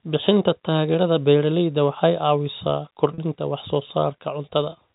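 A speech recording carried over G.711 telephone coding, band-limited to 4 kHz. At 3.14 to 3.18 s, packet loss with pitch repetition leaves a 40 ms gap, consistent with two 20 ms packets. The receiver repeats the last pitch period, giving a brief held, buzzy tone.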